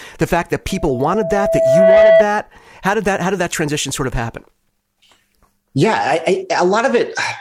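A microphone is picking up the loudspeaker it feeds, and just after "the fact that", from 0.68 to 2.25 s, that loop tips into loudspeaker feedback squeal: a steady 655 Hz tone swells over roughly a second and a half to sit about 10 dB above the speech.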